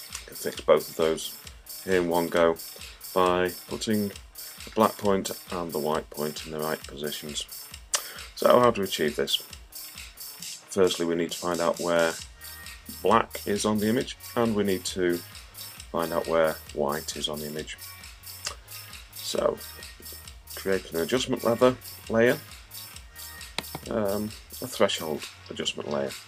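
The signal is free of technical faults for its whole duration, with no audible disruption anywhere in the sound.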